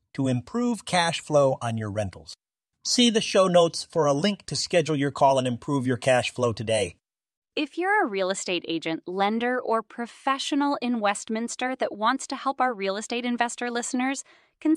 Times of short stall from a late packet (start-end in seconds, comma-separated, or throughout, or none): none